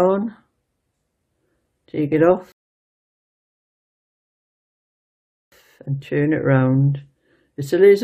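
At 2.52 s a rebuffering stall cuts the audio to silence for 3 s. The player ran dry and paused, resuming at 5.52 s exactly where it stopped.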